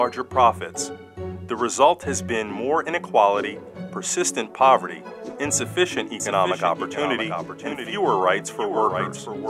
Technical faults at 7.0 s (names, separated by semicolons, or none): doubled audio track